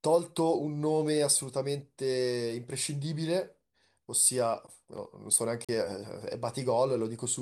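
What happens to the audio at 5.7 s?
A Bluetooth stall, likely interference delaying packets until the headphones' buffer emptied, drops the speech to 41 ms of silence from 5.65 to 5.69 s.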